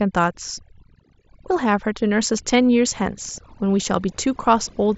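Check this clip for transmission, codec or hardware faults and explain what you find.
One fault runs through the whole clip: overdone noise removal. A noise reduction stage was set far too aggressively. It pulls individual frequency bands down hard, or shuts them off, whenever their level sits close to what it takes to be noise. In the pauses the background collapses to near silence, broken only by small twinkling specks. The quieter parts of the speech get cut along with the noise. The headset link, likely mSBC, is doing its normal job: content stops at about 7.7 kHz, with only light graininess from the codec.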